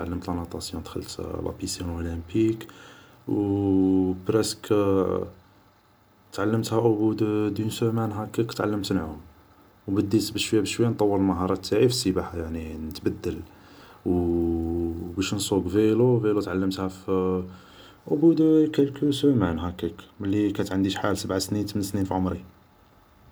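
No technical faults turn up anywhere in this speech clip. Nothing in it points to a break in the chain from capture to playback.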